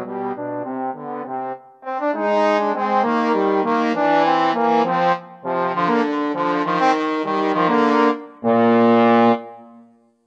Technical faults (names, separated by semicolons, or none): adaptive stream at a lower bitrate